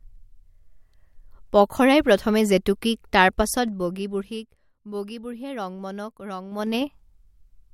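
From 3.28 to 4.72 s the speech is pulled down by roughly 15 dB in about 3 dB jumps, a few per second, and from 6.48 to 6.88 s it comes back up by a similar amount in much quicker steps. This is zipper noise: the gain moves in unsmoothed increments, so each jump ticks audibly. On a waveform the envelope shows a staircase, and a spectrogram shows thin vertical broadband lines at each step.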